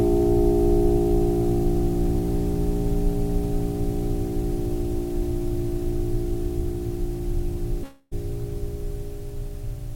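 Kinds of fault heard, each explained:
Long network dropout: from 7.83 to 8.13 s the music becomes a smeared, buzzy extension of its last sound, fading over about 280 ms without falling silent, then resumes with that stretch missing, likely from lost packets. Spectrograms show blurred, decaying bands; the waveform shrinks.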